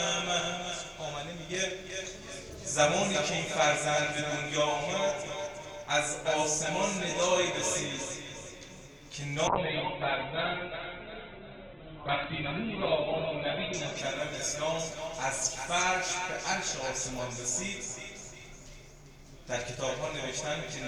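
From 9.48 s to 16.81 s a call bitrate drop sets in: the encoder is starved of bits, its audible bandwidth collapsing from 20 kHz to 4 kHz, fitting a fall from about 128 kbps to 8 kbps. For roughly 4.0 s at the bottom, the sound turns muffled, coarse and watery before recovering.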